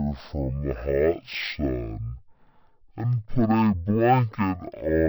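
From the first moment to the last, the speech crawls at half speed and sits a full octave low, 12 semitones down, sounding slow and heavy throughout. This is stereo read as mono: left and right samples, stored alternately, were played back in sequence as one channel, doubling duration and halving pitch.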